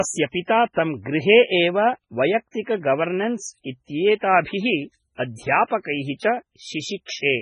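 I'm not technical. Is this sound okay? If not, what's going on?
No, the speech has a watery, swirly quality from start to finish, with s sounds turning into metallic chirps and the starts of syllables sounding smeared. This is likely MP3 compression squeezed very hard: the treble stops dead above about 10.3 kHz, and quiet details flicker in and out from moment to moment. A plain muffled recording would lose brightness smoothly without that bubbling, shifting texture, which is what points to heavy MP3 compression.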